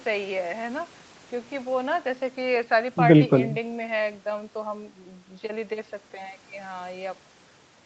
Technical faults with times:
none

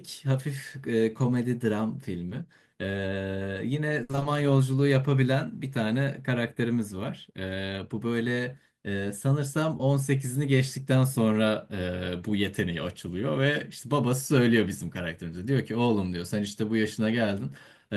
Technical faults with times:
2.29-2.33 short concealed packet loss
4.03-4.27 repeated packet loss (robotic sound)
9.77-9.81 short concealed packet loss

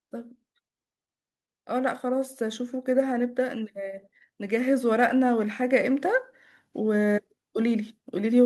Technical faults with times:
4.47-8.46 automatic gain rising

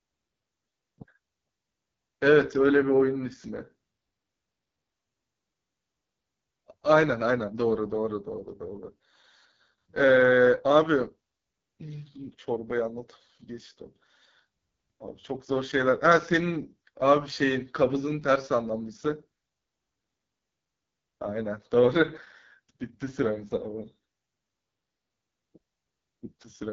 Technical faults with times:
0.00-26.72 AMR wideband (HD Voice) codec

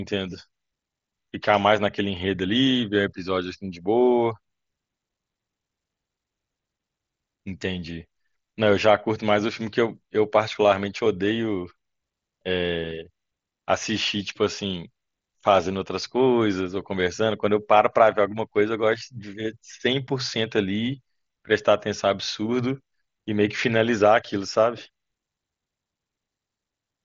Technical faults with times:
none

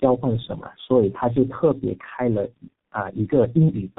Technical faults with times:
0.00-3.98 tandem speech coding

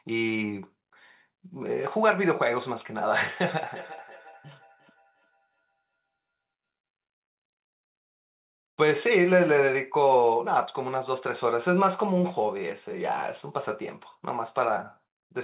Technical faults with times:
3.71-6.17 feedback echo between two devices

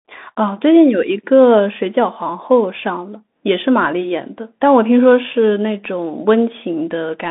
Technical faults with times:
0.00-7.31 Bluetooth CVSD headset codec

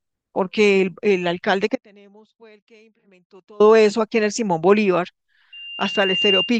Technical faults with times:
1.76-3.60 audio dropout to a faint residue

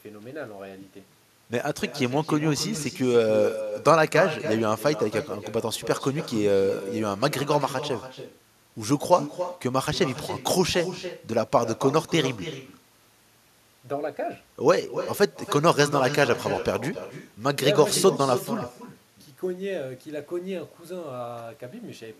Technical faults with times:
0.00-22.19 echo with no canceller

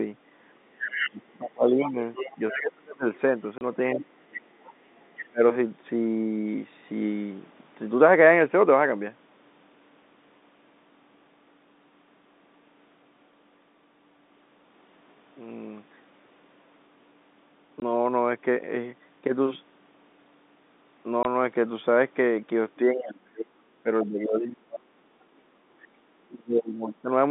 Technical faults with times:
0.71-5.41 speech suppressed in double talk
0.94-5.24 other side's voice leaking through
3.58-3.61 packet loss filled with silence
17.80 packet loss filled with silence
21.23 packet loss filled with silence
22.93-27.10 speech suppressed in double talk
23.91-23.99 other side's voice leaking through
25.94-26.03 background gated by the echo canceller

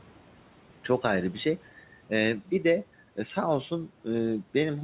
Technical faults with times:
0.00-4.84 noise suppressor artifacts

